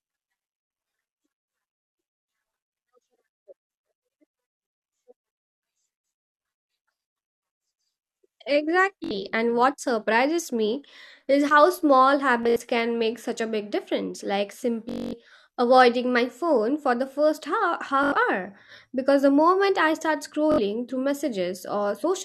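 Bluetooth stutter breaks into the speech five times: at 9.04 to 9.11 s, 12.43 to 12.60 s, 14.89 to 15.13 s, 18.04 to 18.12 s and 20.52 to 20.58 s. Packets arrived late or not at all, so the receiver kept replaying its last short slice, giving a brief machine-gun buzz. About 64 ms goes missing at 9.04 and 20.52 s and 85 ms at 18.04 s. At 12.43 s, 107 ms is lost in bursts scattered over 170 ms. The worst gap is 235 ms at 14.89 s, which points to roughly eleven dropped packets. After each gap the speech resumes further on, as though it had kept playing.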